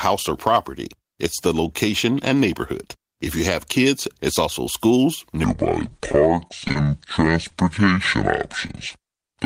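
From 5.44 s to the end, the speech plays at about 0.61 times its proper speed, a section at the wrong speed. Pitch drops by roughly ten semitones together with the slower pace, so the voice turns deep and dragging rather than merely sounding lower. That coupling likely points to the playback clock being mismatched, not deliberate pitch-shifting or a tape-style wobble, because the ratio holds steady all the way through.

Inside that slowed stretch, from 5.89 to 6.77 s, comes repeated packet loss with a robotic sound. Seven short holes, the longest about 30 ms, arrive in quick succession, and each is bridged by extending the previous sound, so around 15 percent of the span is patched rather than real. The back-to-back patching gives a choppy sound with pieces missing that sets it apart from a single isolated dropout.

Two single short concealed packet losses follow, at 7.48 s and 8.67 s, each covering about 20 ms of missing audio. 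Here the decoder fills only one small gap before blending back, so each one is heard as a brief smear or wobble. It is over almost at once, unlike the sustained robotic texture earlier, and it stays confined to a single moment.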